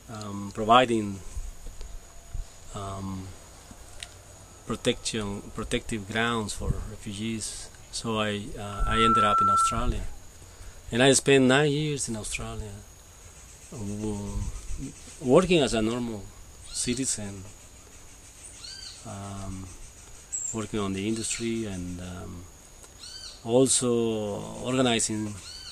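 From 8.63 to 9.96 s a loudspeaker feedback squeal rises: a single 1.3 kHz tone swells over about 0.4 s to roughly 5 dB above the sound, as the microphone re-amplifies its own loudspeaker output. Its steady pitch and self-building growth distinguish it from a brief click or broadband distortion.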